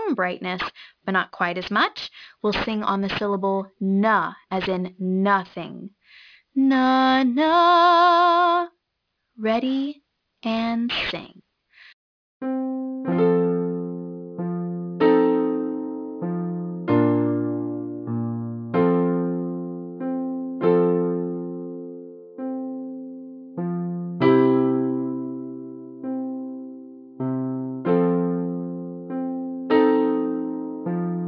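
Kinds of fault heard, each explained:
Aliasing: The sound was resampled to a lower rate without first removing content above half that rate, so high frequencies folded back down to unrelated pitches. Here the band stops hard at 5.5 kHz, which fits a drop to about 11 kHz, and the folded energy sits roughly 20 dB below the signal, giving sibilant or bright sounds a gritty, metallic edge throughout. A spectrogram shows content packed up to a sharp 5.5 kHz ceiling, with mirrored traces moving opposite to the real harmonics.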